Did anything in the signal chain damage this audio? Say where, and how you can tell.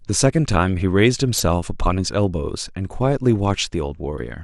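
Yes. Throughout the speech there is a dull, band-limited tone with a gurgling, granular roughness, which is likely MP2 compression at the codec stage. The amount of damage fits a rate of about 80 kbps. Too few bits leave the upper sub-bands switched off or flickering, and the surviving bands are coarsely quantised. On a spectrogram the top end looks ragged, with horizontal blocks of energy appearing and vanishing frame by frame.

From 1.37 to 1.40 s there is a brief burst of burbling distortion, which is DAB burbling from reception errors slipping past the error correction into the MP2 data. The short burst points to about two corrupted frames, consistent with a small residual bit error rate. Bad samples put short blips of noise into single sub-bands. On a spectrogram this shows as isolated bright horizontal patches.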